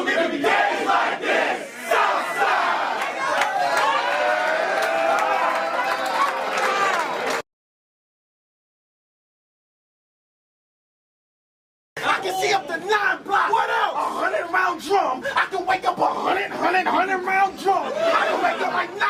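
Listening closely, nothing in the audio stood out as a technical problem at any point.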